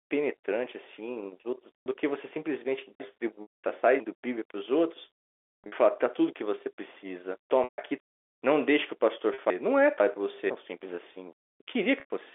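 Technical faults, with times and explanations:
1.83, 3.42, 5.64, 7.64, 9.34 and 12.0 s, packet loss with pitch repetition: the last pitch period is looped to cover gaps of 40 to 140 ms, fitting 20 ms packets. At 5.64 s about 260 ms is lost in short runs over about half a second. The waveform shows identical repeating cycles tapering off, and the spectrogram shows frozen, flat harmonics. The 40 ms gaps sound like a brief buzzy hold. The longer ones fade toward silence before the sound cross-fades back.
3.0–4.0, 6.0–8.0 and 9.5–10.5 s, chunks out of order: 500 ms blocks play late, one block late in the first and third spans and three blocks late in the second. The sound jumps back and forth and seems garbled at the hard joins. The waveform shows abrupt steps and the spectrogram shows vertical seams at each splice.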